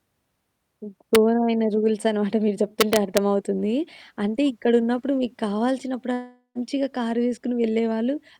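Speech with two kinds of fault. Integer overflow produces a single sharp crack at 1.15 s, then a run of violent cracks from 2.81 to 3.17 s, where peaks exceed full scale by about 1 dB. Instead of being held at the limit, each overshooting sample wraps to the opposite extreme. On the waveform this appears as vertical spikes jumping rail to rail. On a spectrogram it shows as bright broadband vertical streaks, harsher than flat-topped clipping. From 6.13 to 6.58 s the audio breaks off, most likely because of a long network dropout. About 0.42 s of sound is missing. The receiver fills the gap by continuing the last sound as a buzz that fades, and roughly the final 0.1 s is silent before the speech resumes further on. A spectrogram shows a smeared, decaying band ending in a dark gap. The waveform shows shrinking repetitive cycles and then a flat line.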